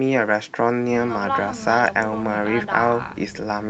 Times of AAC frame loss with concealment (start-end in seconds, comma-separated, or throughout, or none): none